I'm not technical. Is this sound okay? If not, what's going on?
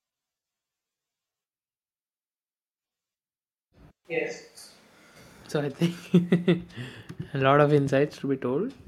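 No. From 4.05 to 5.16 s the speech suddenly turns roomy and hollow, thinner in the bass, somewhat quieter, with more background noise, then snaps back. That is a switch to a distant microphone, likely because the close microphone's signal dropped out briefly.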